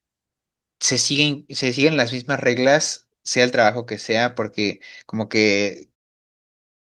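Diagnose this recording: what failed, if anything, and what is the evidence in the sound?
Nothing stood out on listening to this speech recording, and the smooth fade-out near the end, beginning at about 6.0 s, sounds like an ordinary edit.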